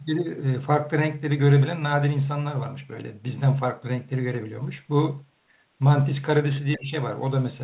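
From 6.77 to 6.93 s, the echo canceller likely mistook the talker for loudspeaker echo, so speech is suppressed in double talk, dipping roughly 15 dB.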